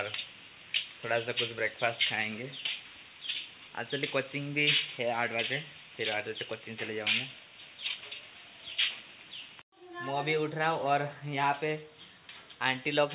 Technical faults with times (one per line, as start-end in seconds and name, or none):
none